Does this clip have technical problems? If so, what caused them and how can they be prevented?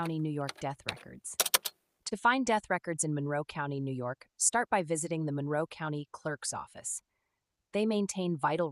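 Yes. There are two short stalls from a late packet, at 1.69 to 1.73 s and 2.09 to 2.13 s. Each time a packet arrived late and the jitter buffer emptied. The receiver held the last sound for 16 ms, then 23 ms, and lost nothing. A deeper jitter buffer or a steadier network path would prevent this.

A jitter buffer slow-down runs from 3.24 to 3.84 s. The receiver repeated short stretches to add 45 ms of reserve, so playback runs at about 94% speed at unchanged pitch. Sounds are drawn out here. Less network jitter would prevent this.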